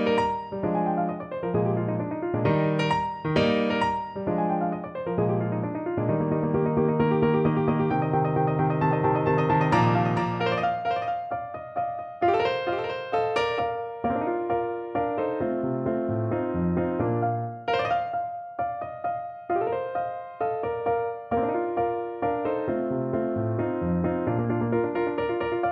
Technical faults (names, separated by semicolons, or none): doubled audio track